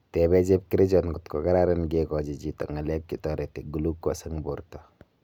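Listening to the speech in this clip, nothing stood out as a technical problem.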